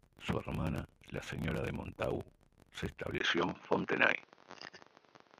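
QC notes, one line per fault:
3.18–5.39 s, input switched to a poorer device: after a 20 ms gap, the speech turns duller and boxier, with nothing above 6.5 kHz, a level shift of around 5 dB, and a new noise floor roughly 40 dB under the signal. This is likely a change to a narrower-band microphone or headset path. On a spectrogram, the upper band is cut flat at 6.5 kHz from the switch onward. The waveform shows a brief dropout, then a stepped amplitude change.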